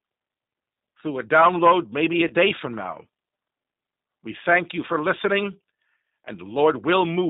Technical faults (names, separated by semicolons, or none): G.729 codec; VoIP packet loss concealed by the speech codec